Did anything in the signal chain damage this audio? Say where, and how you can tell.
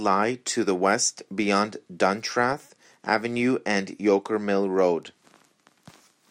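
No, nothing in the chain damaged this speech.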